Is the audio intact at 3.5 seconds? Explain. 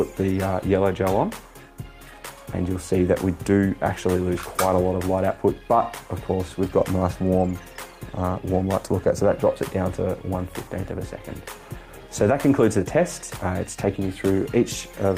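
Yes, the audio at 3.5 seconds is intact, with no dropout, click, distortion or other fault audible at that point.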